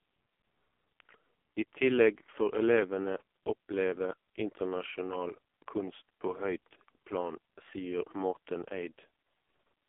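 AMR narrowband mobile codec damage runs through the whole clip. Nothing above 3.5 kHz survives, and the speech sits in a 250 Hz to 3.4 kHz telephone band. The heavy buzzy, synthetic quality fits the codec's lowest 4.75 kbps mode.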